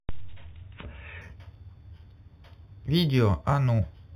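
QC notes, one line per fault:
1.21–4.15 s: imaging from linear upsampling. From this point the top of the band turns dull while a faint metallic shimmer rides on sibilants. The sound points to audio raised from an 8 kHz rate by straight-line interpolation, a weak filter that rolls off the genuine highs and leaves a mirrored copy of the spectrum between 4 kHz and 8 kHz, roughly 25 dB below the speech, which gives the metallic, shimmering edge.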